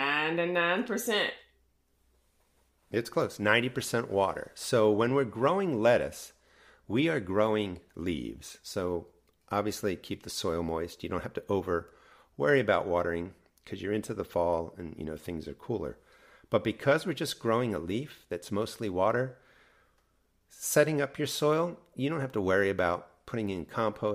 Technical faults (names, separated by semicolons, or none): none